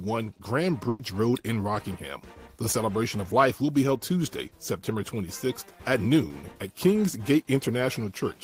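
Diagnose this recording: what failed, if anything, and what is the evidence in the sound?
A burst of packet loss on the network path hits at 0.89 s. Until 1.01 s the receiver extends the last sound, fading it over about 100 ms, then resumes with 100 ms missing. A spectrogram shows frozen, dimming energy ending in an abrupt jump.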